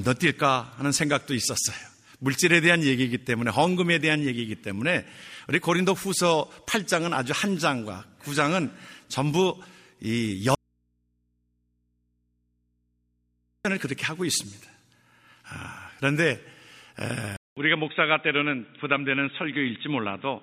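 At 10.55 s the sound drops out abruptly to a faint residue and stays gone until 13.65 s, about 3.1 s. All that's left is low mains hum, way down, around 50 dB under the signal. It's likely a break upstream while the input stayed live.

Then at 17.37 s there's a 200 ms silence and the sound comes back dull and boxy, with nothing above 3.8 kHz and a new noise floor roughly 40 dB down. Level barely changes. That's likely an input switched to a poorer device.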